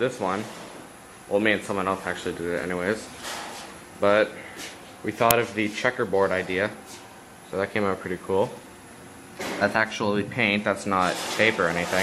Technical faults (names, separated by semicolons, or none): uninitialised buffer